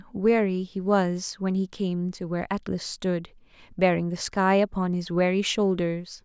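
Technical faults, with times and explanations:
No technical faults detected.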